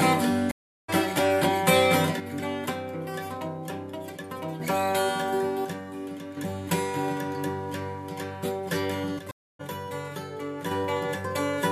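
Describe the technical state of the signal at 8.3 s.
At 8.3 s the signal is intact, with no audible dropout, distortion, glitch or other technical fault.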